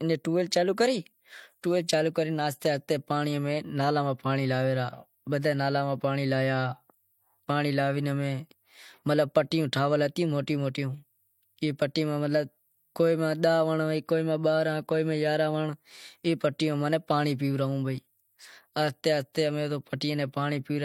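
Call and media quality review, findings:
Transcoding between lossy codecs, throughout; the sound points to an MP3 encode near 63 kbit/s, likely re-encoded to HE-AAC near 40 kbit/s. The second encoder wastes bits on the first one's artefacts. Both artefact sets are audible together on the speech, with nothing above 18.3 kHz.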